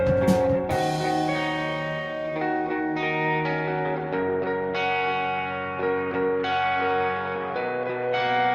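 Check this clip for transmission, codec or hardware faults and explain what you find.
Nothing in this music recording points to a fault. There is no interruption or disturbance that would need explaining.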